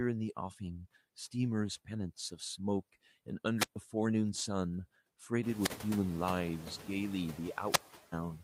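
Right from the start there are noise suppressor artifacts: steady background hiss gets pulled down by about 15 dB between phrases and swells back under the speech. Then come three wireless microphone squelch dropouts, at 3.56, 5.53 and 7.69 s. Each time the radio link fades, hiss rises, and the receiver mutes for roughly 0.13, 0.14 and then a longer 0.36 s. The second one lands just as the room noise gets louder around the 5.5 s mark.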